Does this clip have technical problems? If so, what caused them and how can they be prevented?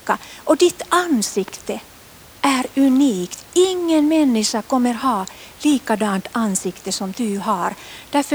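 No, this clip has no technical problems, so there is nothing to prevent.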